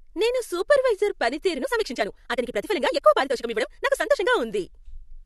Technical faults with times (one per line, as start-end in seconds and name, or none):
1.53-4.27 time-stretched section